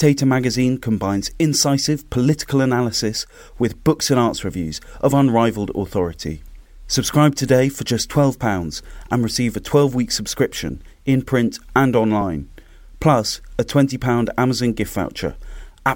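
It's a speech clip with two small skips in it, at 9.02 s and 12.21 s. Each one is a quick spot where the sound jumps forward, losing only a few milliseconds with no gap of silence. That's the signature of a dropped buffer (overrun), likely caused by the recording software not reading its buffer before the hardware wrote over it, so the audio on either side just gets butted together.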